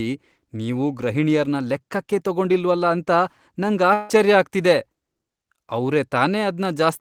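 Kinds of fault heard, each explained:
Long network dropout: from 3.93 to 4.11 s the speech gives way to a fading buzzy continuation of the last sound, about 0.16 s long, and resumes with that stretch missing, likely from lost packets. The spectrogram shows smeared, repeated harmonics decaying, and the waveform shows a tapering envelope before the resumption.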